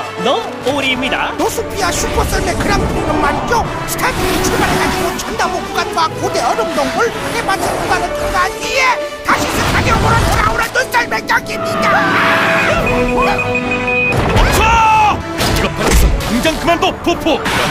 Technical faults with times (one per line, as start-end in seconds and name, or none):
0.42-1.59 loose connector crackle
10.28-10.69 loose connector crackle